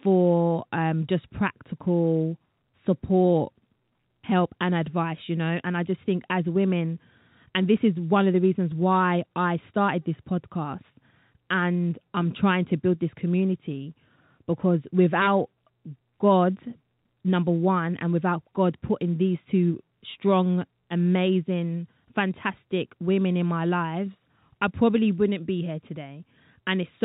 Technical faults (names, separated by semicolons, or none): none